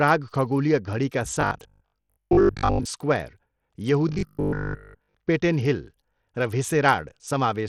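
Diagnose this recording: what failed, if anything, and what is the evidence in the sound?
Bluetooth SBC compression, throughout the clip, at the codec stage. The treble of the speech thins and flickers, with a gritty grain riding on it. The likely cause is a starved SBC bit pool, around 80 kbps, leaving the top sub-bands with too few bits.

Robotic sound from repeated short buffers, at the driver or buffer stage, from 1.41 to 2.87 s after "खगोलीय घडीका" and from 4.09 to 5.15 s before "पेटेन हिल". A rigid 50 Hz metallic buzz rides on the speech, following it only roughly. It likely comes from a 20 ms block being replayed in place of most of the incoming audio.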